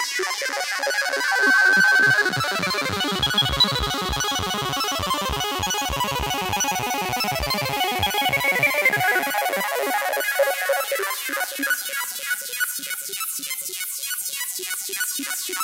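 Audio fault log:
0.79–2.22 s, loudspeaker feedback squeal: a microphone picked up the loudspeaker it was driving, and around 1.6 kHz the loop gain went above one, so that frequency kept recirculating and reinforcing itself. The result is a single steady tone that swells over roughly three quarters of a second into a piercing squeal about 10 dB above the surrounding sound, then ends at 2.22 s.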